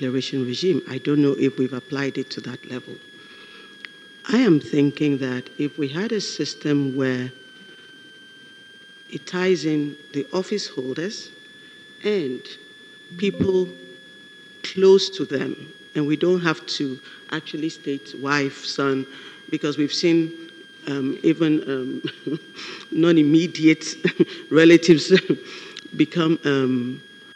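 From start to finish there's a switching supply whistle riding under the audio: a thin, high tone wandering between about 1.53 and 1.73 kHz, sitting roughly 25 dB below the programme. That's a switching power supply dropping into an audible burst mode, or two supplies beating against each other, so its pitch slides around as the load shifts. It's quiet but persistent.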